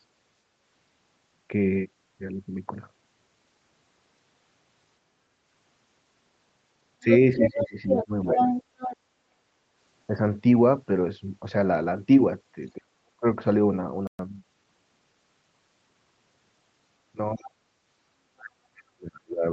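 From 7.02 to 8.06 s a second voice comes through at roughly the same level as the main speech. This is the other side's voice leaking through: the talker's loudspeaker was likely picked up by the microphone, and the echo canceller failed to remove it. It reappears from 8.37 to 8.97 s. Unlike a crosstalk or mixing error, this voice arrives only in these short bursts, tied to moments when the far end was talking.

Overlapping the first leak, from 7.04 to 8.38 s, the main voice dips by around 15 dB over a total of roughly 0.7 s. This is speech suppressed in double talk: with both sides speaking at once, the canceller likely could not tell the talker from the echo and turned everything down. The same happens more deeply, about 35 dB, from 12.75 to 13.26 s, and again at 17.33 to 17.55 s, about 25 dB down. Another dip, also near 35 dB, runs from 18.31 s to the end.

At 14.07 s the sound stops dead for 120 ms and resumes at 14.19 s. 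This is a playback stall, likely the player running dry or its thread being blocked. A codec packet loss would be masked or concealed, but here there is plain silence in mid-flow.

From 14.19 to 14.67 s the audio runs about 1.25 times faster at unchanged pitch. This is time-compressed catch-up, where the player trims its backlog by splicing out small slices. Unlike a speed error, the pitch does not rise.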